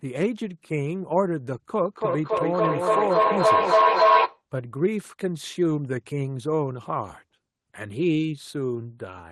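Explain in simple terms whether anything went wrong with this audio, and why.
Something did go wrong, from 1.83 to 4.44 seconds. The speech starts coming back as a feedback echo between two devices. Two devices in the same room are joined to one call. One plays what the other's microphone sent, and that microphone hears it again. Each echo canceller only removes its own device's sound, so the loop is never broken. The repeats arrive about every third of a second. They pile up until they are louder than the speech itself.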